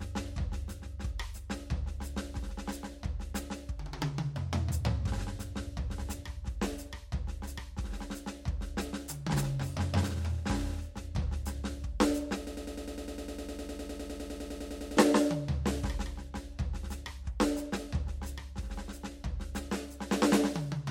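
A piece of music with a broken-record loop from 12.47 s to 14.97 s: a fragment of about 102 ms plays back to back 25 times. The likely cause is a player, encoder or stream that stalled and kept resending its last buffer, so the music due in those 2.5 s is lost. Unlike an echo or delay, nothing decays or blends; every repeat is identical, then playback jumps ahead.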